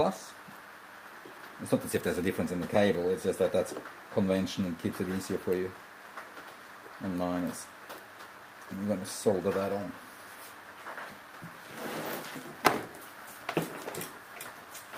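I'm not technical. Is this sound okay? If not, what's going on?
Yes, nothing in this sound stood out as a problem when I listened to it.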